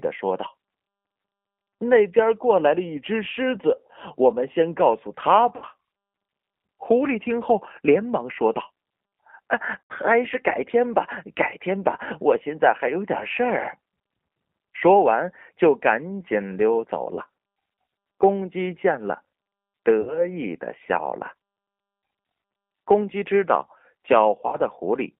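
Speech, passed through a G.729 codec for its whole length, with plainly audible coding damage. The rough, slightly synthetic texture fits an 8 kbit/s G.729A voice link that rebuilds each frame from a vocal-tract filter, a pitch predictor and a few sparse pulses rather than the real waveform. The line band runs from about 150 Hz to 3.4 kHz. On a spectrogram the energy stops sharply near 3.4 kHz with an empty region above, and the harmonics look slightly smeared and grainy. VoIP packet loss concealed by the speech codec breaks in at 5.56–5.65 s (60 ms lost), 9.80–9.92 s (100 ms), 17.15–17.21 s (20 ms), 20.01–20.27 s (60 ms) and 24.47–24.57 s (60 ms). The lost amounts fit 20 ms packets. In each gap the decoder keeps repeating its last pitch and filter at falling gain, so the sound turns into a stretched, buzzy tone or coloured noise that fades. Because every frame builds on the one before, the audio stays weak or distorted for a while after packets return. 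A spectrogram shows frozen, flat spectral content that dims across each gap, and the waveform shows a regular, decaying envelope instead of the normal syllable shape.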